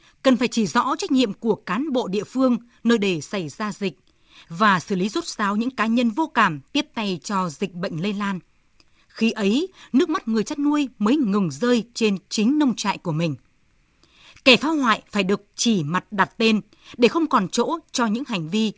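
Nothing's actually wrong with this bit of speech; it just carries the expected character of a WebRTC call path using G.722, with no content above about 8 kHz.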